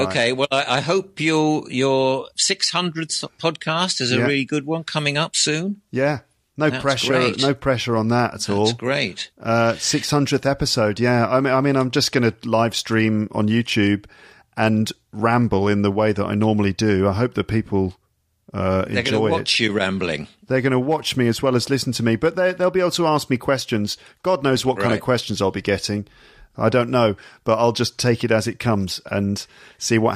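No technical faults are audible anywhere in this speech.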